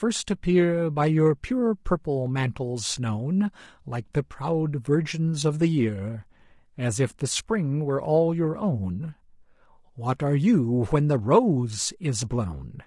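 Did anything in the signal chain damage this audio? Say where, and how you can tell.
Yes, at the codec stage: the speech carries low-delay AAC compression from start to finish, likely from an AAC-ELD encoder of the kind used for video calls, and the damage is plainly audible. Its short frames, around 500 frequency lines each, are quantized coarsely at this low bitrate, so noise fills the gaps between the pitch harmonics and the voice turns rough and grainy. The top band sounds thinned or synthetic, and the overall strain fits a bitrate near 32 kbps.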